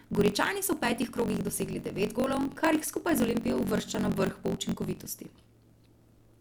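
From start to finish the speech carries a block size mismatch (truncated) fault: one stage writes longer blocks than the next reads, so the tail of every block is dropped. That produces a steady 46.9 Hz buzz, which fits a 1024-sample read, and the talking runs 1.12 times fast. Unlike a sped-up playback, the timbre stays where it belongs, and unlike the padded form of this fault, nothing slows or fills with silence.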